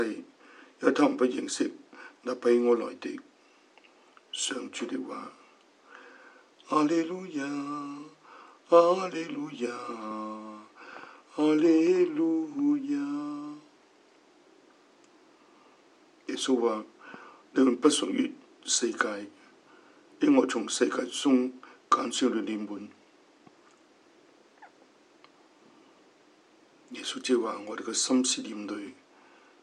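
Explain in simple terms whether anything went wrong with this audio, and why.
Nothing went wrong with this audio; there's no fault to point to anywhere in it.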